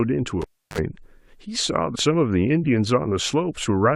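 Cable pulled and plugged in, 0.42 to 0.78 s: a pop, about 0.32 s of near silence, then a 47 ms burst of 50 Hz mains buzz as the plug's tip touches, and a second pop when the speech returns. Damaged data in a compressed stream, 1.94 to 1.96 s: corrupted bytes knock the decoder out of sync while it hunts for the next frame, leaving a brief glitch.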